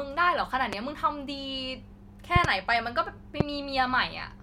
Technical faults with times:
0.73-0.75 loud pop
2.36-2.47 loud pop
3.40-3.43 loud pop

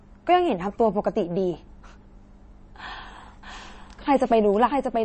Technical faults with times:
0.00-5.05 MP3 compression
3.43-5.05 doubled audio track

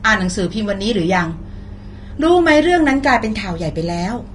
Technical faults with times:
0.00-4.35 Vorbis compression

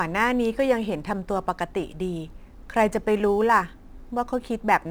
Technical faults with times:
0.00-4.91 crude rate conversion

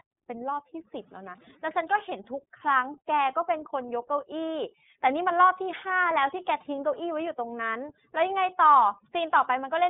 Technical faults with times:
0.00-9.89 overdone noise removal
0.00-9.89 iLBC codec

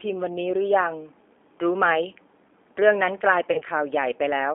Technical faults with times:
0.00-4.55 G.729 codec
3.52-3.63 VoIP packet loss concealed by the speech codec

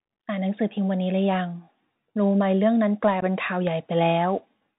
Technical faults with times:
0.00-4.79 Bluetooth CVSD headset codec
3.21 unconcealed Bluetooth headset packet loss

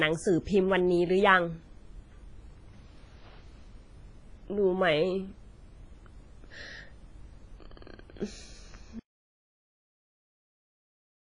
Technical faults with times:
0.00-11.35 WMA compression
8.99-11.35 audio dropout to silence

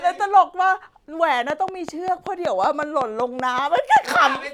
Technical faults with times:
1.50-4.36 train of clicks

